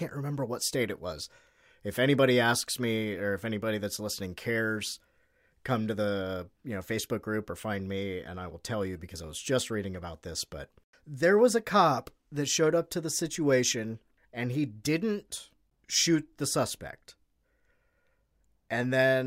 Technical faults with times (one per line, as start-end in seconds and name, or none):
none